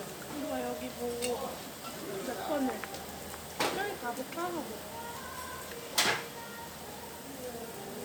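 From 1.57 s to 7.62 s, regular clicks recur every 2.01 s, about four in all, likely clock drift buffer slips. A tiny block of samples drops or repeats at each slip, showing as a waveform discontinuity and a thin vertical broadband line on a spectrogram.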